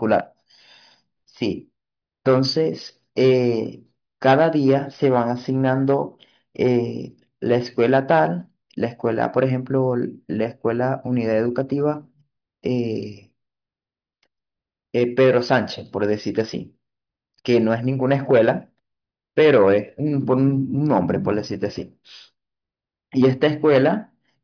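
Nothing in this recording trips up the ear, with no faults turning up anywhere along the way.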